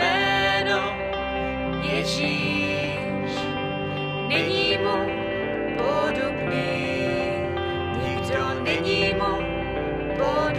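No technical faults can be heard anywhere here.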